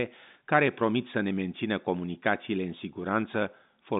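Nothing stood out on listening to this speech, which comes across with the narrow, band-limited character of an ordinary telephone line.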